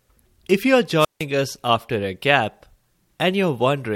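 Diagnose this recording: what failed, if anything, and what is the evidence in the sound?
A wireless microphone squelch dropout failed the analogue radio link before the receiver. From 0.98 s to 1.25 s, hiss rises, then the speech cuts to near silence for about 159 ms. The RF signal faded until the receiver's squelch muted its output.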